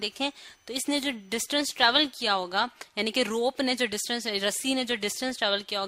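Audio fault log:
0.00–2.19 s, switching supply whistle: a thin high whistle near 3 kHz, drifting between about 2.9 and 3.1 kHz, roughly 40 dB below the sound, from a switching power supply running in audible burst mode or beating with another one.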